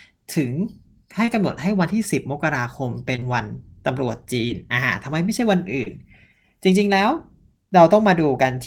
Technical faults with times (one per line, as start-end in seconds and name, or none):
1.25-1.29 short concealed packet loss
3.15-3.23 short concealed packet loss
4.47-4.51 short concealed packet loss
5.83-5.88 short concealed packet loss